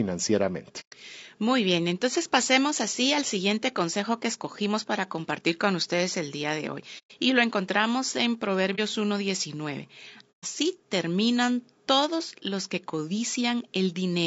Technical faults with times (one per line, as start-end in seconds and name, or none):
0.00-14.26 low-delay AAC compression
0.80-0.93 AAC frame loss with muting
6.98-7.11 AAC frame loss with muting
8.75-8.79 AAC frame loss with muting
10.32-10.45 AAC frame loss with muting